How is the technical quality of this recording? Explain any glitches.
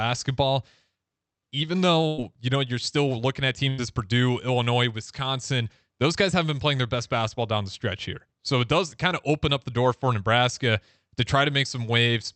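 The recording has two short dropouts in the speech. Burst of packet loss at 2.07 to 2.21 s, just before "you know you're", and again at 3.69 to 3.81 s, after "looking at". In each, about 80 ms of audio never arrived, so the receiver stretched the last sound across the gap while fading it, leaving a brief buzz or hiss before the speech resumes with that stretch missing.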